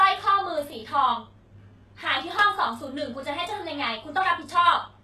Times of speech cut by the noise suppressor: none

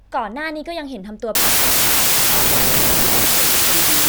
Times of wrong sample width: 1.35-4.09

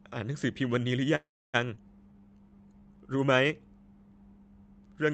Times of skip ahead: 1.76-1.79

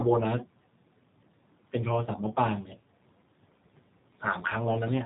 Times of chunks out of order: none

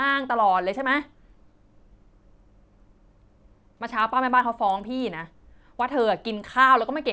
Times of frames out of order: none

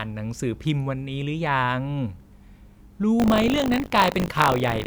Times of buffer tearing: 3.18-4.86

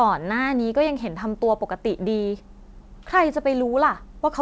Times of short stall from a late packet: none

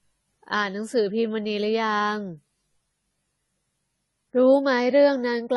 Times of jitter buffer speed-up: none

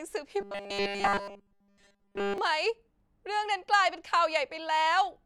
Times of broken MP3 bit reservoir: none

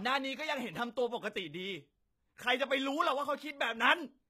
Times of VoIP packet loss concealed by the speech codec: none

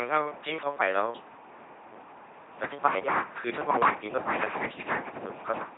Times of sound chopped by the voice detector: none

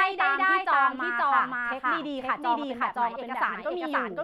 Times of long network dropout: none

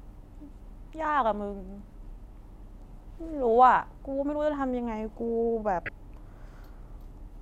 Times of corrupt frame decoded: 5.86-5.89

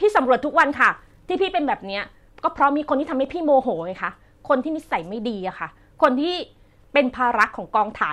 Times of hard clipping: 0.59-0.87, 2.63, 6.04, 7.41-7.44

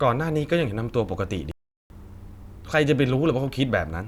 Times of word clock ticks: none

